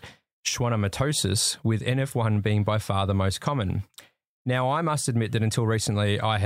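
Nothing in this speech recording points to a technical fault. There are no events to time or to explain.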